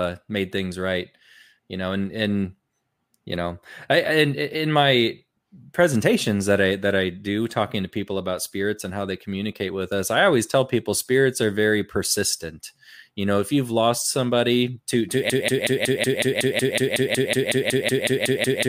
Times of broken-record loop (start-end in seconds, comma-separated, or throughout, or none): 15.30-18.69